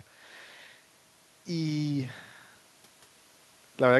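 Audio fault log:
Nothing in this speech recording stood out as a problem on listening.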